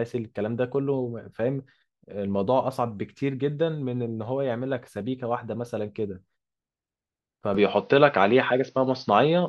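At 7.55 s the speech abruptly turns duller and boxier, with no gap at the changeover, and stays that way to the end. This is likely an input switched to a poorer device: a different microphone or headset path with a narrower band. On a spectrogram, energy above 6.3 kHz vanishes at that instant and a new faint noise floor, roughly 40 dB below the speech, appears. The waveform shows a step in level of roughly 5 dB.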